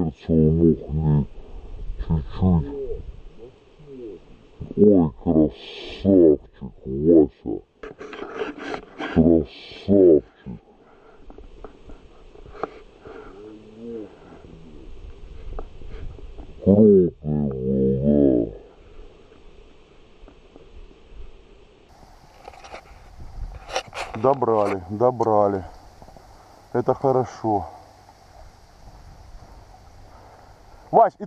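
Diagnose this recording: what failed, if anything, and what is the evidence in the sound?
Section at the wrong speed, 0.0 to 21.9 s: playback runs at 0.557x, about ten semitones deep, likely from a clock mismatch. On a spectrogram, harmonics sit lower; the waveform looks stretched.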